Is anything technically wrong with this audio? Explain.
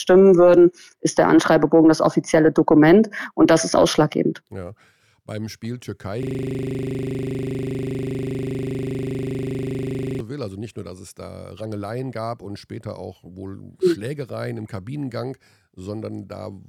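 Yes. From 6.23 to 10.20 s there is a system hang loop: the system froze while the audio hardware kept replaying one 40 ms stretch of its ring buffer, about a hundred identical repeats, heard as a rough 25 Hz buzz. Unlike an underrun stutter, there are no gaps, just exact repetition.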